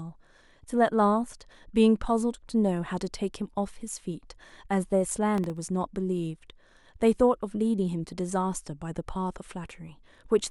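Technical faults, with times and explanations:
5.35 to 5.57 s, processor overload crackle: gritty crackle over the speech. Very short buffers missed a handful of deadlines in a row. Each replayed old audio with hard edges.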